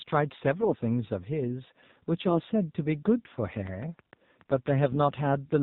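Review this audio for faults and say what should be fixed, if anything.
The speech was carried over AMR narrowband mobile coding at what sounds like 7.4 kbps, which cuts everything above 4 kHz and rebuilds the voice from a sparse pulse model. The result is muffled, buzzy and synthetic throughout. A wideband codec or higher bitrate path would prevent this.

AMR bit errors appear from 0.60 to 0.76 s and from 4.83 to 4.97 s. On a weak link, lightly protected bits arrived flipped at a rate of a few percent, misplacing excitation pulses and skewing gain and spectral values. Pitch and level roughly hold, but the voice turns hoarse and gargly. Stronger link margin or error concealment would prevent it.

A train of clicks runs from 3.57 to 5.27 s, about ten irregularly spaced pops at roughly 5.35 per second, peaking about 5 dB above the speech. The likely cause is interference from nearby equipment injecting pulses, heard as ticking over the sound. 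Shielding, grounding or moving the equipment would prevent it.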